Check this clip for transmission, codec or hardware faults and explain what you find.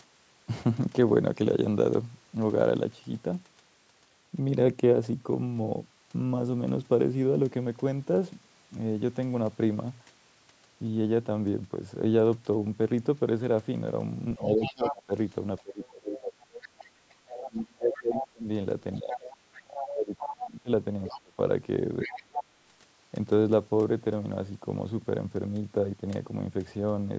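Two faults appear between 14.37 and 22.51 s, both tied to echo cancellation during a call.

Speech suppressed in double talk: from 14.37 to 16.37 s and 17.32 to 22.51 s, the voice dips, by around 25 dB then around 30 dB. This is likely the echo canceller muting speech it couldn't separate from loudspeaker echo.

Other side's voice leaking through: from 14.61 to 22.43 s, a second voice sits roughly 10 dB below the talker. Uncancelled loudspeaker echo is the likely source.

The call's microphone filtering, with nothing above 8 kHz, is normal.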